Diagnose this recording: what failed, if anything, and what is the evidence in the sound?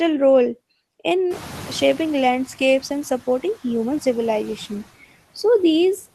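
The call-processing noise suppressor is working on every frame of this speech, cutting the bands it judges to be steady noise by about 14 dB. The floor dips in the gaps between phrases and comes back up under the talking, so the background pumps with the speech.

The second fault is the noise suppressor catching up. Room noise jumps by about 19 dB at around 1.5 s, settling about 20 dB below the speech, and the suppressor's noise estimate lags the change. From 1.30 s to 2.48 s the new noise passes with only about 5 dB of reduction. Over that 1.18 s the estimate adapts, and the background then sinks to the suppressor's full depth.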